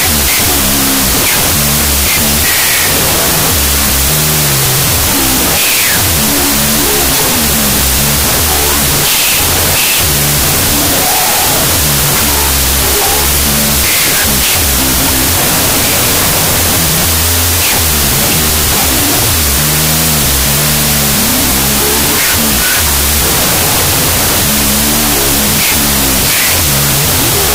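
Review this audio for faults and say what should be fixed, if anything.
Wrong sample width, throughout the clip: audio stored as 32-bit floats is being read as 16-bit integers. Each four-byte float splits into two integer samples, so the speech plays at half speed and an octave low. The half of each float holding the sign and exponent loosely follows the signal's level, and the mantissa half becomes dense, loud noise, leaving the speech buried under a harsh hiss. Prevent this by reading the sample format from the file header, or passing it explicitly, instead of assuming 16-bit integer data.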